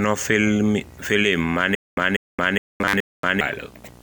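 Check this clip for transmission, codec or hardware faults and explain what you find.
Three faults are present: a constant video or display buzz, a stretch of stutter with silent gaps, and a short burst of robotic sound from repeated short buffers.

Video or display buzz runs through the whole clip: a low 60 Hz hum with a hashy edge, roughly 25 dB below the speech. A screen or video cable is coupling into the audio path, leaking its picture field rate into the signal.

Stutter with silent gaps appears from 1.75 to 3.41 s. The same 194 ms burst of speech plays four times, each followed by 220 ms of dead digital silence, repeating every 414 ms. The likely cause is a stalling player replaying its last fragment at each retry, so the original audio from that span is lost.

Robotic sound from repeated short buffers covers 2.81 to 3.25 s. The speech becomes a rigid, metallic buzz pinned at 100 Hz while loosely tracking the speech. 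The likely cause is audio arriving too seldom, with roughly half the time filled by repeating the last chunk, which fits a 10 ms buffer.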